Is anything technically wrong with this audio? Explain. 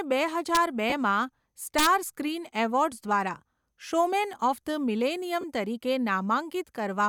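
Yes. There are two integer overflow events and two short dropouts from lost LE Audio frames.

Integer overflow hits at 0.55 to 0.57 s, overdriven by about 1 dB, and again at 1.78 to 1.87 s, by about 5 dB. Peaks past the integer ceiling wrap to the opposite sign instead of being limited, giving sharp cracks on loud speech. On a waveform the tops jump straight across to the opposite rail. A spectrogram shows broadband vertical streaks.

Lost LE Audio frames occur at 0.90 to 0.93 s and 5.41 to 5.44 s, each a gap of 22.5 ms, consistent with three frames. The LC3 decoder refills the gap by repeating the last spectrum with randomised signs, so the speech briefly turns into a noisy smear. On a spectrogram the harmonics blur into diffuse noise.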